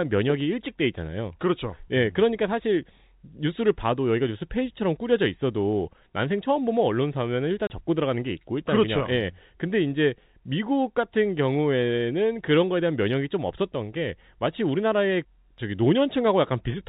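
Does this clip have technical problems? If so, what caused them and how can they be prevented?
Yes. At 7.67 to 7.70 s there is packet loss filled with silence: a 30 ms hole, which fits three 10 ms packets replaced by silence. The waveform drops abruptly to flat, and the spectrogram shows a blank vertical strip. Packet-loss concealment would prevent it.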